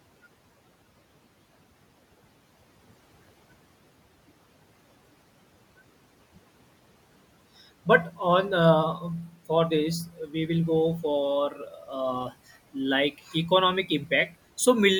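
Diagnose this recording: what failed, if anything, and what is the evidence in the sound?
The noise suppressor in the call processing stage is cutting speech. At 10.06 to 10.34 s, between "for this" and "we will", the level dips by about 12 dB. Similar dips follow at 11.5 to 11.89 s (about 7 dB), 13.11 to 13.51 s (about 9 dB) and 13.86 to 14.11 s (about 11 dB). The suppressor mistook short, quiet stretches of speech for the room noise beneath it and turned them down, so they sound swallowed.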